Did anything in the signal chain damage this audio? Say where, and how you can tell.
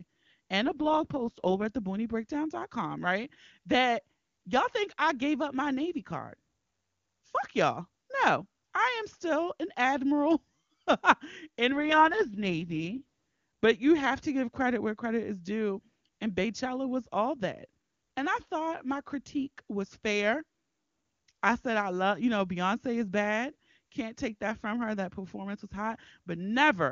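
Yes. There is an AMR rate drop at the network and codec stage, from 0.65 to 1.65 s and again from 11.70 to 13.01 s. The speech turns raspy and synthetic, which fits a fall from 23.85 to 6.6 kbit/s. Unlike packet loss, it keeps full bandwidth and has no gaps.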